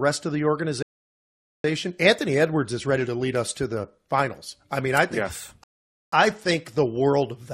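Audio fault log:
0.83–1.64 s and 5.64–6.12 s, rebuffering stall: playback ran out of downloaded audio after "of the" and "mean I think yes", so the speech drops to silence for about 0.82 s and 0.49 s, then resumes exactly where it stopped.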